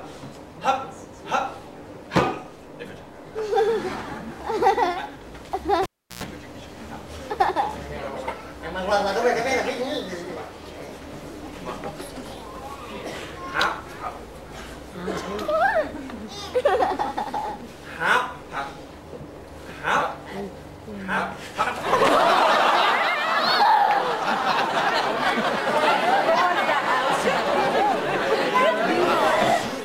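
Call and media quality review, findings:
Cable pulled and plugged in, 5.83 to 6.24 s: live input lead disconnected for 0.35 s, then reseated. Pop, near silence, 0.11 s of 60 Hz mains buzz while only the plug tip made contact, second pop on reconnect. Probable component: input cable or jack.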